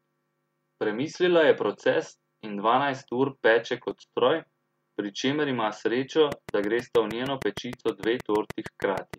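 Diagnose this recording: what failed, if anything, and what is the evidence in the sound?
Dropped samples, likely a driver or buffer glitch: a fraction of a millisecond vanishes, so the waveform jumps, leaving single sharp clicks at 3.91 s, just after "in dvanajst ur peče", and 8.68 s.

Train of clicks, likely from interference in the analogue wiring or a faulty connection: around twenty regular pulses at 6.4 per second, peaking about 10 dB above the speech, tick from 6.32 s, after "pri čemer ima srečo", to 9.15 s.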